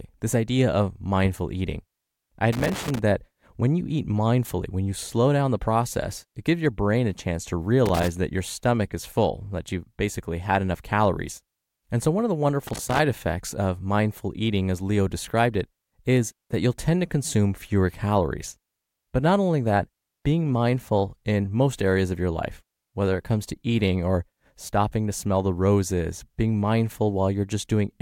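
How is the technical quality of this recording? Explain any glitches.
The recording has three short bursts of loose connector crackle, at 2.53 to 2.99 s, 7.86 to 8.08 s and 12.67 to 12.99 s, each lasting about a fifth to half a second. They sound like an irregular crackling and scratching laid over the speech. A worn or dirty contact in the signal chain is making and breaking as it shifts, chopping the audio on and off in rapid, uneven steps, and any DC on the line turns those breaks into clicks.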